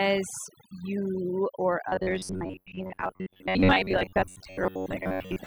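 A speech recording carries overdone noise removal from start to finish: the background falls to near silence dotted with twinkling specks, and quieter parts of the voice are pulled down along with the noise. What separates this from a low-bitrate codec is where the damage lands. Individual frequency bands switch off whenever they sit near the noise estimate, leaving isolated sparkles in otherwise empty gaps, rather than a uniform dullness or smearing across the whole sound.

From 1.89 s to the end, the speech turns into a rigid, metallic buzz locked at 93.8 Hz while still roughly tracking the words. This is the robotic sound from repeated short buffers, likely caused by audio arriving too seldom so that the last stretch of about 10.7 ms is replayed in place of new material, with roughly half the sound repeated instead of heard. Unlike a comb-filter or flanging colouration, the buzz here stays at a fixed rate.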